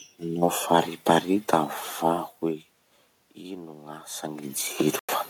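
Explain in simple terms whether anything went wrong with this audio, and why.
Two things went wrong. From 3.41 to 4.58 s there is automatic gain rising. The speech got much quieter at the microphone, as the talker moved away. The recorder responded by slowly turning itself up. So the voice and the room noise swell together over about a second.

At 4.99 s the sound suddenly cuts out for about a tenth of a second, then comes back at 5.09 s. It picks up further along, as if it kept playing during the gap. This is likely a Bluetooth dropout, where sound on its way to the headphones arrived too late.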